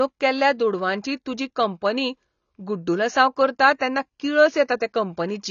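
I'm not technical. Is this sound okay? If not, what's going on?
No. The speech sounds dull and smeared from start to finish, with nothing above about 6.9 kHz, so crisp sounds like s and t lose their edge. The likely cause is heavy AAC compression, which discards detail to make the file small.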